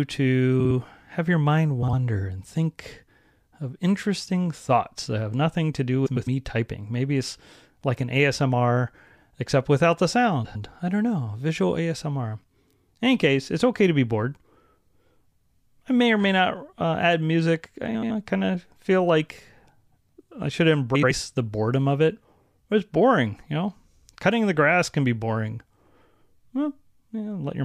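Six spots where frames come out of order, at 0.60, 1.82, 6.06, 10.44, 17.94 and 20.95 s. Each time two neighbouring runs of frames got decoded in swapped order, so a short stretch plays back to front in two halves: about 52 ms halves in the first pair, about 104 ms in the next two, about 78 ms in the last two. You hear a brief garbled flutter, and nothing goes missing.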